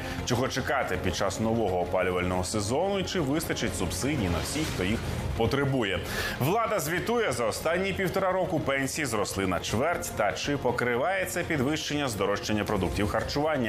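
At 2.39 s a short, ragged burst of crackle and scratching cuts across the sound, lasting under a tenth of a second before it clears at 2.48 s. This is loose connector crackle: a worn or dirty contact in the signal path shifted and briefly lost and regained continuity many times in quick succession, chopping the audio into fragments, with any DC present on the line turning each make and break into a pop.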